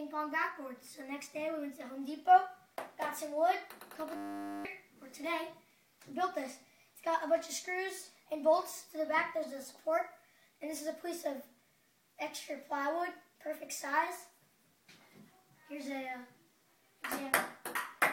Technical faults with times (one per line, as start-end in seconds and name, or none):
4.16-4.65 system hang loop